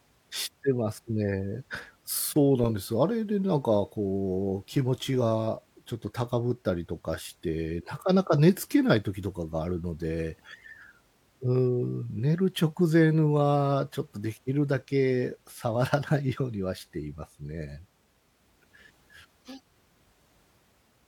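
Nothing in this speech recording stood out as a technical problem on listening.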